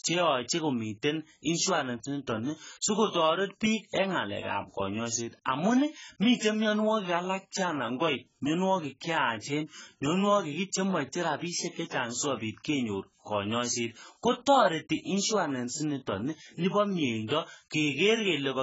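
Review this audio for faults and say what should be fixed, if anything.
Heavy AAC compression, likely AAC-LC run at a very low bitrate, affects the whole clip. The damage fits a stream of around 12 kbps. With so few bits per frame, the encoder has discarded everything above 7.7 kHz and quantised the remaining frequency lines coarsely. The speech comes out dull and smeared, with a warbling, fizzy texture on sibilants and held sounds. Encoding from the original at a much higher bitrate, or keeping a lossless copy, would prevent it.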